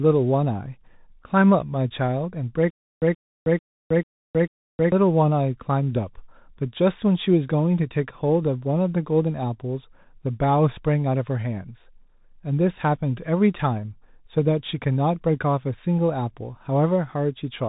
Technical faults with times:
0.00-17.68 Bluetooth CVSD headset codec
2.71-4.92 stutter with silent gaps

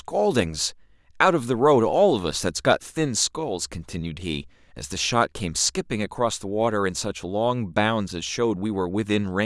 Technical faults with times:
none

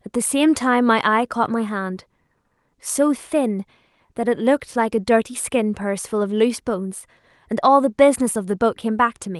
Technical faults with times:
none

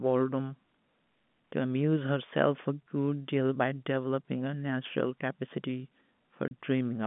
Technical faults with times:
6.48-6.51 packet loss filled with silence

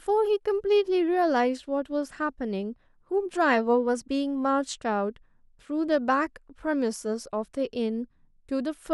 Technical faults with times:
none

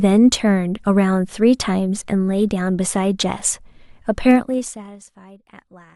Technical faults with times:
3.39 chunks out of order
4.29-5.03 zipper noise

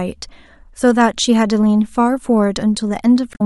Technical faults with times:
3.31-3.41 damaged data in a compressed stream

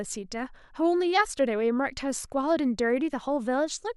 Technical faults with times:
none

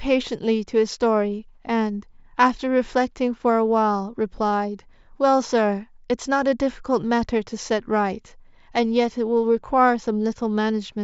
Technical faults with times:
none

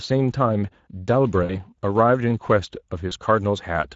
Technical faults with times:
0.00-3.95 Speex codec
1.43-1.59 VoIP packet loss concealed by the speech codec
3.09-3.13 VoIP packet loss concealed by the speech codec

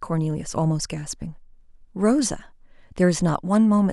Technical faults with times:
none

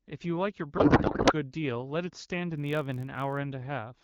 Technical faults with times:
0.77-1.33 codec payload misread
2.56-3.38 block size mismatch (padded)

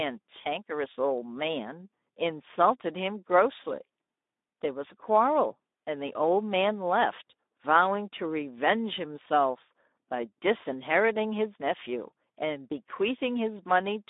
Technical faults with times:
0.00-14.09 Speex codec

